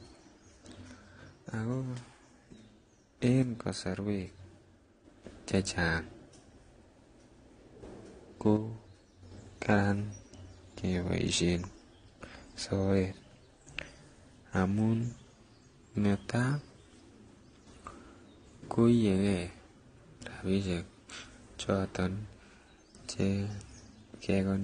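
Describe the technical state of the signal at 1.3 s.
At 1.3 s the speech sits inside a stretch from 0.82 to 3.19 s where the level drops abruptly by about 6 dB. One channel drops out, likely one stereo side lost before a mono sum, so shared content halves. The waveform shows a clear step down in envelope at 0.82 s and back up at 3.19 s.

Running through this moment is the sound of transcoding between lossy codecs. Everything stops sharply at 9.7 kHz, and the artefacts of one codec layer over those of another. The mix likely points to a low-rate AAC stage re-encoded as Vorbis. On a spectrogram the top edge is a flat wall, with patchy, blocky texture below it.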